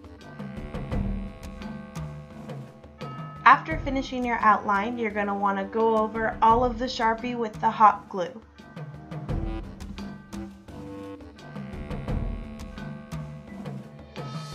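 No technical faults can be heard anywhere in the recording. Nothing in it breaks, drops out or changes from one moment to the next.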